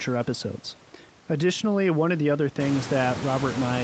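Nothing stood out on listening to this speech clip.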